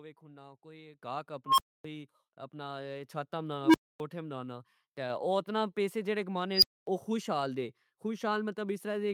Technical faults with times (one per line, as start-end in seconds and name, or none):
1.02 microphone volume stepped up
3.06 microphone volume stepped up
5.10 microphone volume stepped up